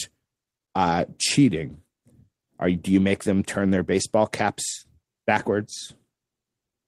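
Nothing technical goes wrong anywhere in this bit of speech, so there's nothing to flag.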